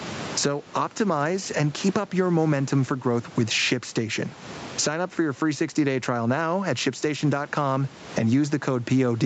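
Gain pumping runs through the whole speech clip. Loud and soft parts sit closer in level, and the sound is squashed. The level swings by around 20 dB. The likely cause is input gain set far too high, with a fast limiter clamping each peak.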